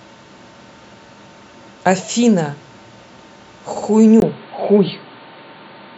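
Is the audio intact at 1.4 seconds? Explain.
Yes, the audio at 1.4 seconds is intact, with no fault of any kind at that moment.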